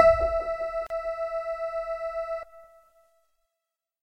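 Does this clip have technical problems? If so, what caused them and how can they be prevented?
Yes. Separately encoded pieces were joined without trimming the encoder's start delay and end padding, leaving a gap at a join of encoded pieces: about 36 ms of silence from 0.87 to 0.90 s, with smeared edges, before the sound resumes. Trimming encoder delay and padding, or encoding gaplessly, prevents it.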